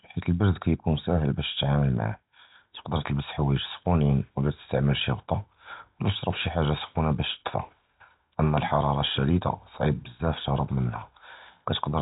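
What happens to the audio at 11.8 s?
Nothing goes wrong at 11.8 s: the speech continues intact through that moment, carried by the same narrowband G.711 telephone coding as the rest of the clip.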